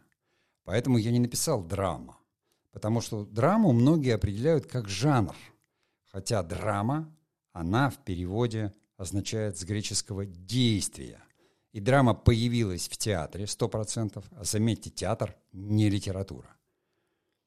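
Nothing in the recording points to a technical problem at any moment, so there's no fault to walk through here.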